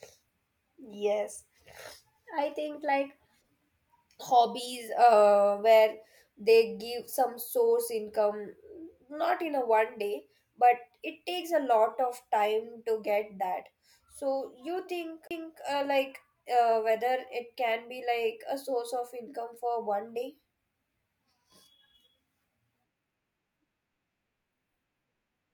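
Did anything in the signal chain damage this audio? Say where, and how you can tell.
Yes: a CD skip in playback at 15.27 to 15.31 s, before "uh like". The laser jumped tracks, leaving a brief mute, seen as a waveform gap and a vertical spectrogram line.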